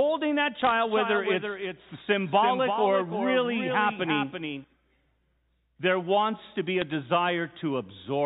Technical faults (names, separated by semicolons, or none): bit errors on a digital phone line; doubled audio track